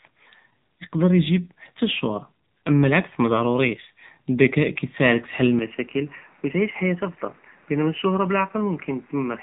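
Throughout, the speech carries AMR narrowband mobile codec damage: buzzy, synthetic tone, a spectrogram ceiling near 3.8 kHz, and artefacts that fit a low mode around 7.4 kbps. From 5.59 s to the end, the sound abruptly turns duller and about 5 dB quieter, with no gap. The spectrogram ceiling drops to 3 kHz and a new noise floor appears roughly 30 dB down, most likely an input switched to a poorer device.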